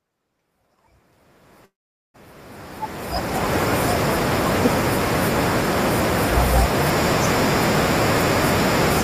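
At 1.65 s the speech stops and a brief remnant of the last sound trails off, then roughly 0.44 s of silence follows until 2.16 s, when the speech resumes exactly where it left off. This is a call audio freeze, likely caused by packets stalling in transit so the receiver's jitter buffer emptied. About 0.49 s was inserted rather than lost, so everything after 2.16 s runs that much later. The gap falls within the fade-in that rises from the start to 3.55 s.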